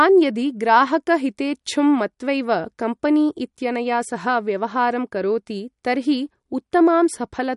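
Speech throughout with plainly audible watery, swirly artefacts and nothing above 11.2 kHz; unlike a simple low-pass filter, this points to likely MP3 compression, fitting roughly 50 kbps.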